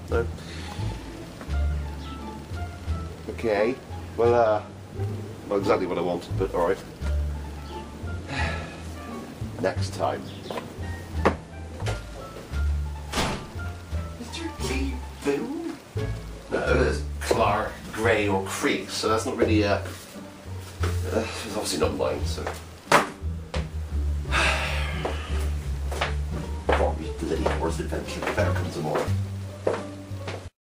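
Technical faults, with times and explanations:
Nothing technical to flag here; there's no fault in the clip to point to.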